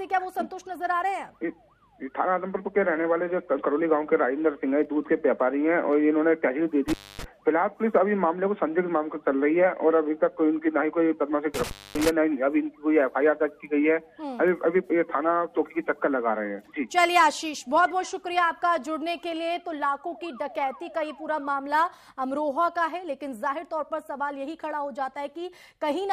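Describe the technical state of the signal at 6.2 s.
At 6.2 s the signal is intact, with no dropout, clipping, glitch or other fault to be heard there.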